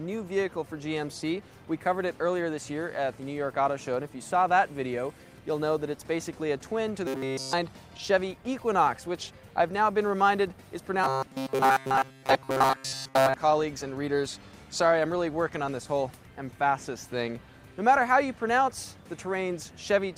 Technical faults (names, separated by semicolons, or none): robotic sound from repeated short buffers